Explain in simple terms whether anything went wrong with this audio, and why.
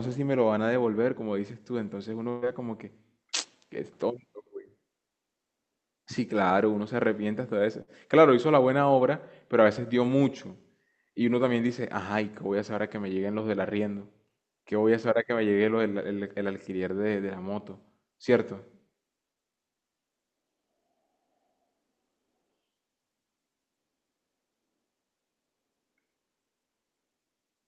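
A burst of packet loss hit the call twice, at 2.29 to 2.45 s and 7.82 to 7.90 s. The receiver filled each gap by stretching and fading the last sound, then skipped ahead, so about 120 ms and 60 ms of speech are missing.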